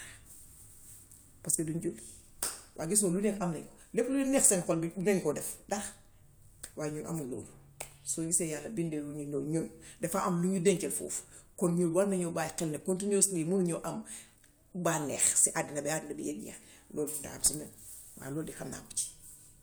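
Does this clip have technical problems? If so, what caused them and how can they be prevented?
No, the speech signal shows no technical problems at any point.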